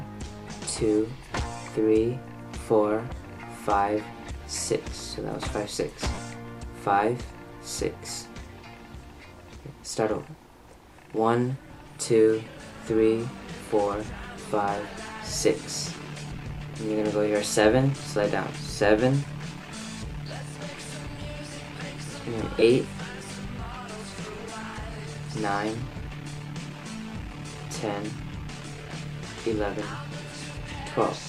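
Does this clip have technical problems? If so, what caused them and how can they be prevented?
Yes. A brief noisy smear replaces the sound at 6.14 to 6.18 s and again at 22.59 to 22.62 s. These are lost LE Audio frames. The LC3 decoder refilled each gap by reusing the last spectrum with random signs, which fits about five and three 7.5 ms frames. A stronger Bluetooth link with less interference and distance prevents this.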